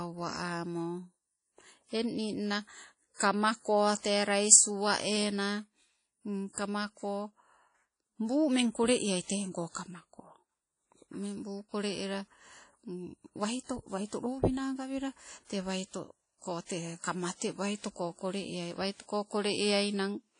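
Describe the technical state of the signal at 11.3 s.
At 11.3 s the speech carries the same damage heard across the whole clip: nothing above about 10.1 kHz, plus a ringing, washy smear and hiss that swells with the signal. This is likely WMA compression, where coarsely quantised long transform blocks spread noise in time, consistent with a low bitrate around 32 kbps.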